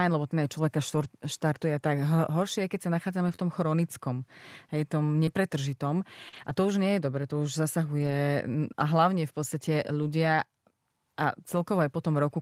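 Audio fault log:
0.95–10.04 s, scattered short gaps: about three lost packets, none longer than roughly 40 ms, patched by extending the preceding speech, leaving brief ticks and smears.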